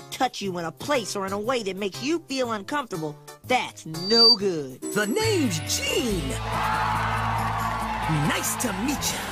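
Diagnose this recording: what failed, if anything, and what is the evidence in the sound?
A loudspeaker feedback squeal occurs in the analogue acoustic loop between microphone and loudspeaker, from 3.95 to 4.38 s. A single tone at 4.6 kHz swells out of the sound over roughly a third of a second and peaks about 10 dB above it. At that frequency the loop gain crossed one, so the tone fed itself. Mains hum or interference whine holds a steady level, but this tone grows from nothing.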